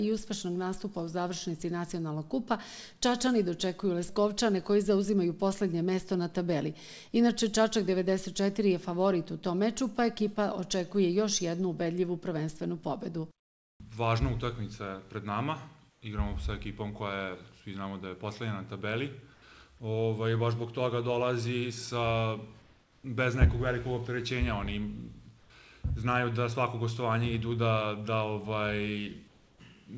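Comfort noise in place of the background at 13.40–13.80, 15.90–16.02, 19.34–19.42, 22.62–23.04, 25.40–25.50 and 29.28–29.60 s. In each pause the real background turns into a flat, detailless hiss, about 1 to 9 dB quieter. The likely cause is discontinuous transmission: the sender went silent and the receiver synthesised filler noise.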